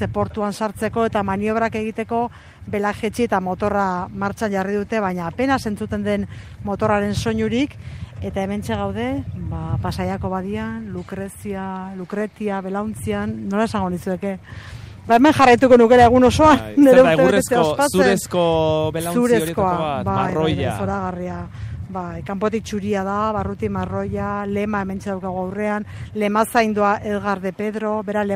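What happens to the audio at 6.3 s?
Nothing goes wrong at 6.3 s; the audio plays through that moment intact, with no dropout, click, glitch or other fault.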